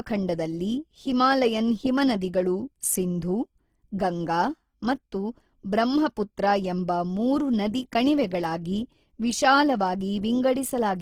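Throughout the clip, the speech sounds rough and grainy, with a noisy texture over its tones. This is likely Opus compression in music mode, at a rate near 16 kbps. Starved bands are filled with folded or noise content. The top still reaches 20.3 kHz.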